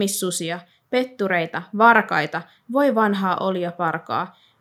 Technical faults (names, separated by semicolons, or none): none